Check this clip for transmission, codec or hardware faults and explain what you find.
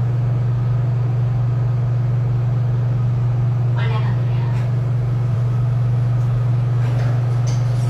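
One fault is audible. At 5.30 to 5.34 s a brief glitch reveals damaged data in the compressed stream; the decoder lost sync and resynchronised at the next frame.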